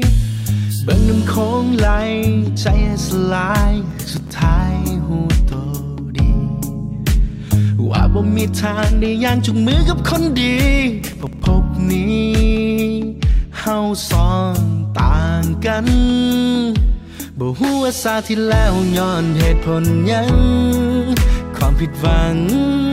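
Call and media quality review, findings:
Processor overload crackle at 3.91–4.29 s and 11.02–11.40 s: gritty tearing bursts over the audio. The audio engine is missing deadlines. Each missed buffer is skipped outright, leaving tiny hard-edged gaps. Gap length fits buffers of around 1.5 ms, roughly 10 in the first burst and 15 in the second.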